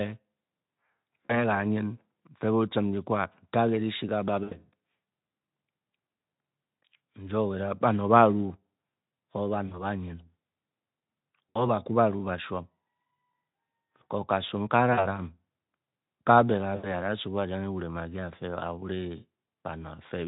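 VoIP packet loss concealed by the speech codec hits the Speex-coded speech at 1.27–1.45, 4.43–4.55, 9.67–9.85, 11.50–11.67, 14.93–15.06 and 16.75–16.94 s, covering 40 to 80 ms of lost audio each time. Instead of a silent dropout, the decoder stretches its last pitch and filter into a buzzy tone or coloured noise that fades, and the voice stays weak for a moment after the audio returns.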